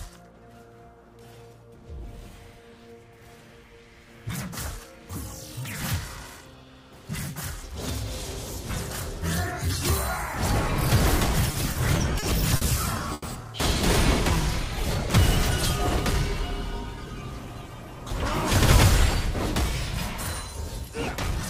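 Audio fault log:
11.51–12.63 s, repeated stalls (stutter): The audio drags and hiccups five times across this stretch. Brief held or smeared moments interrupt the flow, the longest about 50 ms, together 140 ms or roughly an eighth of the span. Nothing is lost. Packets kept arriving later than they were needed, so the jitter buffer emptied repeatedly, and each time the receiver extended the last sound until fresh audio caught up.
13.13–13.24 s, short stall from a late packet: A single sound hangs on for about 90 ms, with the slightly buzzy, flattened quality of a stretched fragment, before the audio resumes exactly where it left off. A packet missed its playout time and the buffer ran dry, so the receiver prolonged what it already had. The network delay jumped by 90 ms, matching the length of the hold.
16.96–17.63 s, jitter buffer speed-up: For about two-thirds of a second the audio sounds rushed, running at 108% speed while keeping its pitch. 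Having built up more buffered audio than it targets, the receiver trimmed short pitch-period-length pieces over and over to shrink the delay, removing around 70 ms in all. This produces a hurried pace rather than an audible skip.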